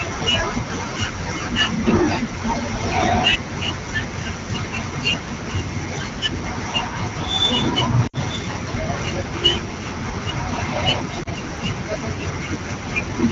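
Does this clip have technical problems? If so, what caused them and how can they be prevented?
Yes. Lost AMR speech frames at 8.07–8.17 s and 11.23–11.28 s interrupt the otherwise clear wideband AMR audio, whose quality fits a rate of about 12.65 kbit/s. Radio errors corrupted the frames, so the decoder repeated the last good pitch and vocal tract settings at falling gain. The first gap, which fits three 20 ms frames, drops to near silence before the speech returns weakly. The second is a single-frame dip or warble. Better radio coverage or more robust channel coding would prevent these losses.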